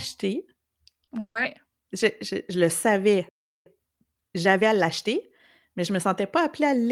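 A brief smear at about 1.05 to 1.09 s in this speech recording is short concealed packet loss. Roughly 20 ms of audio arrived too late to decode, so the receiver extended the preceding sound to bridge the gap before blending back into the real signal. Just after, from 1.19 to 1.37 s, the sound turns into a fading artificial buzz or hiss and then goes quiet for about 70 ms before resuming with a piece missing. This is most likely a long network dropout: around 160 ms never arrived, and the concealment could only stretch the last sound before giving way to silence. At 3.29 s the audio stops dead in mid-flow and stays silent for about 0.37 s until 3.66 s. That fits a playback stall, where the player ran short of data or its thread was held up. From 3.66 to 6.12 s the audio sounds hurried at about 1.15 times normal speed, with its pitch unchanged. This is time-compressed catch-up: after the stall the player trims its backlog by removing small slices and cross-fading the joins.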